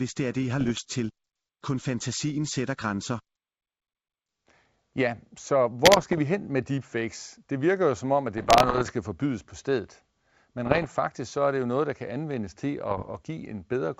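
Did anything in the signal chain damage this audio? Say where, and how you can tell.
Yes. Bit errors on the ADPCM link: pops and rough bursts at 0.61–0.81, 5.84–6.20, 8.38–8.92, 10.66–10.86 and 12.91–13.21 s show as broadband vertical smears and jagged level jumps, with predictor disruption ringing on after each one.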